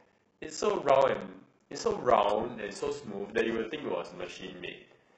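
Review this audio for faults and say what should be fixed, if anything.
There's a steady buzz at about 15.6 Hz through the whole clip, and the speech drags at roughly 0.86x speed while keeping its timbre. That's a block size mismatch (padded): one stage writes short blocks, the next reads full ones, and the gap is zero-filled. The buzz rate fits 1024-sample reads being fed blocks only about 86% full. Make sure the writer and reader agree on block size, or buffer properly between them so no stage ever pads with silence.

From about 2.25 s to the end, codec artefacts suddenly rise, with no gap at the switch. That's the adaptive stream dropping to a lower bitrate. It sounds like a move from an AAC-style stream near 96 kbit/s down to something like HE-AAC around 12 kbit/s. Give the player a bigger buffer or a higher bitrate floor so a slow connection doesn't push it onto the lowest rung.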